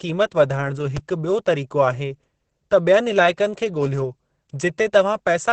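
From the very start, the whole speech clip carries Opus voice compression, and it's pushed hard. The codec is running its SILK linear-prediction path in wideband, so there's nothing above 8.5 kHz and the top end sounds dull and boxed in. The excitation is coded coarsely enough that the voice comes out hoarse, muffled and a bit robotic, with a grainy texture that fits 20 ms frames and a rate somewhere around 10 kbps.

At about 0.97 to 0.99 s there's a loud pop, a single sharp click-thump sitting roughly 10 dB above the speech while the talking carries straight on underneath. It's a brief spike of energy dropped on top of the signal and then gone, most likely from a plug, switch, static discharge or driver glitch. It's short enough that it reads as one hard tick rather than a dropout.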